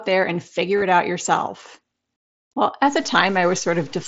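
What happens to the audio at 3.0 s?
From 2.85 s to the end of the clip the sound turns grainy, with distortion about 30 dB below the signal that rises and falls with it. This is likely low bit depth without dither: truncation to a coarse grid, which fits about 7 bits, so the rounding error tracks the waveform instead of forming a steady hiss.

At 3.03 s there is concealed Bluetooth headset packet loss. About 7.5 ms of the mSBC headset stream goes missing, and the receiver fills the gap with the closest-matching stretch of recent waveform. Because only one frame is lost, the patch is brief and almost hidden.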